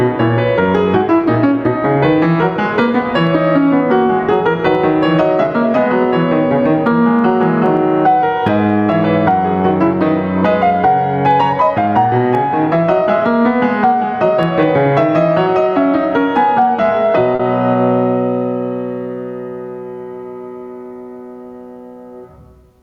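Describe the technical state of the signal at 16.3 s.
At 16.3 s the music is caught in the same gain pumping that runs through the whole clip. The level seems to be swinging by around 15 dB, leaving everything squashed. Likely cause: gain set far too high, with a fast limiter clamping down on every peak.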